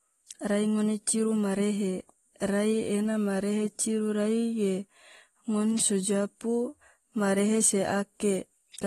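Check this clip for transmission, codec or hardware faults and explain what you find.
One codec fault runs through the entire clip, most likely AAC compression. An AAC-LC encoder running at a low rate, consistent with about 32 kbps, quantised the spectrum coarsely and discarded everything above 12.4 kHz. The speech is left dull and smeared, with plainly audible warbling and fizz on sustained sounds and sibilants.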